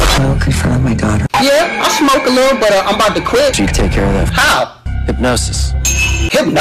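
Hard clipping runs through the whole clip. The signal is driven about 24 dB past what the stage can pass. Nearly a third of the waveform is cut flat at the ceiling. Those flattened tops add high harmonics, heard as a constant harsh fuzz on every loud moment.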